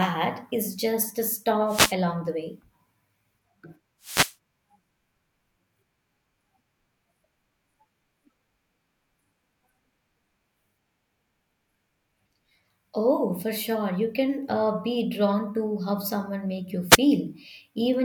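Wireless microphone noise hits: the analogue FM radio link fades briefly, so receiver noise bursts through as short static swishes at 1.67–1.95 s after "is just a", 4.01–4.35 s, and 16.90–16.98 s.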